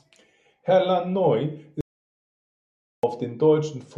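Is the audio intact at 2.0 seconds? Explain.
No. At 2.0 seconds the speech sits inside an audio dropout to silence running from 1.81 to 3.03 s, about 1.23 s of sound lost. The voice stops abruptly mid-flow and returns just as suddenly, with dead digital silence between and no room tone. The likely cause is an input that briefly disconnected or muted while recording continued writing silence. On a waveform this is a flat line; a spectrogram shows a blank black band.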